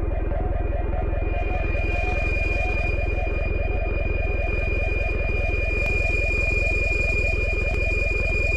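At 3.77, 5.86 and 7.74 s the sound jumps ahead with no gap of silence, skipping roughly 20, 10 and 40 ms, which is likely a dropped buffer (overrun), with samples overwritten before being read, unlike a dropout, which leaves an audible hole.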